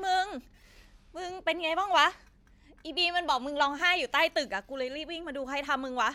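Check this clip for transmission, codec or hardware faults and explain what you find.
Nothing audible in the speech points to a transmission, codec or hardware fault.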